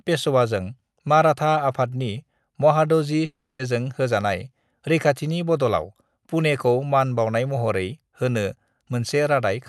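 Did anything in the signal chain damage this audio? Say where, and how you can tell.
Yes, network stage: from 3.25 to 3.61 s the speech dissolves into a fading buzz, then brief silence, likely a long network dropout masked by concealment.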